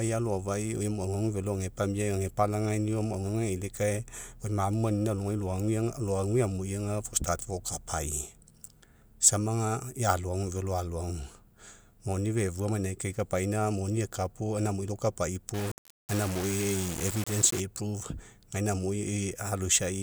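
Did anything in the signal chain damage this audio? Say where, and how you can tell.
Yes. From 15.54 to 17.60 s, just after "gaina amui lakapai", the speech turns grainy with low bit depth without dither, likely a sample-format conversion rounding to 5 bits. The error sits only around 10 dB below the speech and follows it. The spectrogram shows broadband haze during speech that vanishes in pauses, and the waveform shows coarse staircase steps.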